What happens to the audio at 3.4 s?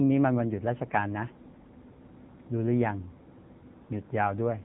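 The AMR narrowband mobile codec runs through 3.4 s and the whole clip. It cuts everything above 4 kHz, and its buzzy, synthetic speech suggests roughly 8 kbps.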